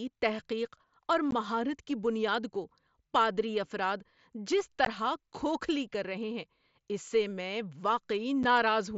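At 1.31 s, right after "تحقیق اور", then 4.85 s, between "کو پادری افراد جس" and "کھوکھلی کر رہے ہیں", and 8.43 s, you get unconcealed Bluetooth headset packet loss. Roughly 15, 15 and 7.5 ms of the mSBC stream just vanish and nothing fills them in, so each one is a hard-edged little dropout.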